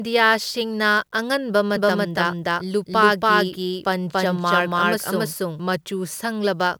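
From 1.76 s to 5.60 s the speech has a doubled audio track: a second, equally loud copy trails the original by roughly 300 ms, likely from a slower capture path. Unlike an echo, it doesn't decay or carry room colour, and it starts and stops abruptly.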